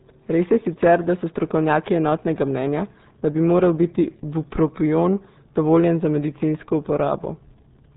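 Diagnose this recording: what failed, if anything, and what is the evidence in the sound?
Across the whole recording the speech is muffled and gargly, with a bubbling, smeared texture on every syllable and nothing audible above 3.8 kHz, so the sibilants and breath detail are gone. The failure is at the codec stage. The heavy damage fits a RealAudio 14.4 codec running at about 8 kbit/s. At a rate sized for dial-up modems, the encoder discards the upper band and models what remains so coarsely that the speech turns into a watery gurgle.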